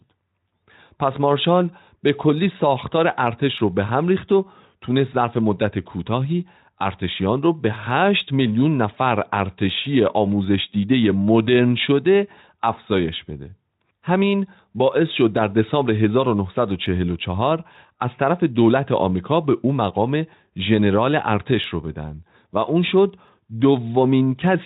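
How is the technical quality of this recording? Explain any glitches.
The recording has one persistent fault, a faint regular ticking throughout the speech. From 0.14 s to 24.6 s, clock slip clicks recur roughly every 0.15 s, some 150 in all. They are likely caused by two unsynchronised clocks differing by around 150 ppm, so one sample is dropped or repeated at each slip. The ticks are clearest on louder speech and absent in pauses.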